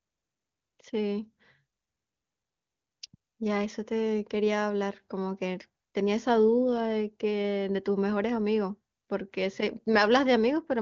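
No technical faults can be heard in this speech, which carries the band-limited character of the AMR wideband (HD Voice) codec at a high rate, consistent with 23.85 kbit/s, with nothing above about 7.2 kHz.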